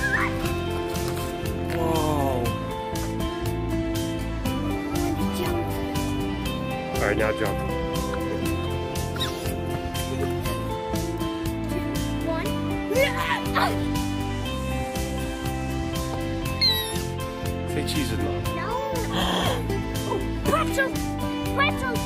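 No technical faults can be heard anywhere in the audio.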